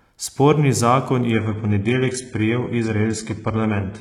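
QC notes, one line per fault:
1.33 s to the end, adaptive stream at a lower bitrate: the speech switches abruptly, with no gap, from a full, clean sound to a thin, synthetic one, with nothing above 11.1 kHz. The sudden step with unbroken continuity is the stream dropping to a lower-bitrate rendition when throughput fell. The synthesized treble and heavier artefacts point to a shift from roughly 96 kbit/s AAC to a 12 kbit/s HE-AAC variant.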